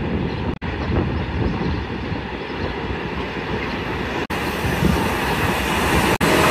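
At 0.51–0.63 s, 4.21–4.31 s and 6.12–6.22 s, damaged data in the compressed stream makes the decoder misread frames and resync, producing brief disruptions.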